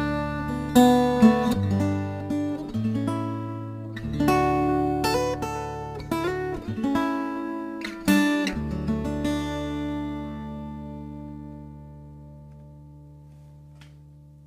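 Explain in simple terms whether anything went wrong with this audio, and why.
Crude rate conversion runs throughout: samples were dropped rather than smoothly recalculated, which fits a change from 48 kHz to 44.1 kHz, adding gritty fizz to loud, high sounds.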